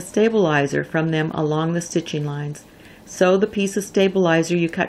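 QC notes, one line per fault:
No technical faults were found in the signal.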